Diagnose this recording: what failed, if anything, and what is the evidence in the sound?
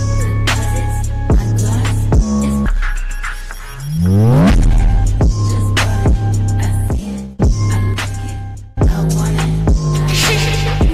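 Skip ahead at 5.17 to 5.19 s, a network or jitter buffer fault. Playback jumps forward with no gap filled in, and roughly a second of audio is missing: the material on either side of the jump is butted together almost directly. Either that stretch was lost in transit, or the receiving buffer overflowed and discarded it while later audio was already queued. Both explanations fit a sudden cut of about a second in the delay.

Jitter buffer speed-up, at 6.95 to 7.82 s and again at 8.37 to 9.03 s, also a receive-side buffer fault. The sound runs fast at unchanged pitch, about 108% speed in the first stretch and about 106% in the second, and both sound hurried. The buffer was holding more audio than its target, so the receiver repeatedly cut out short pitch-period segments, around 70 ms in total in the first stretch and around 40 ms in the second.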